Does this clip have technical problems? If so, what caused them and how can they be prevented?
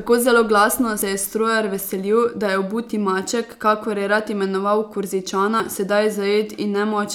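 Yes: jumps in the speech at 1.02 s (between "zelo glasno" and "je strojar"), 3.52 s and 5.6 s, each skipping roughly 20 to 70 ms, likely from a dropped buffer (overrun). Larger buffers or higher capture-thread priority prevent this.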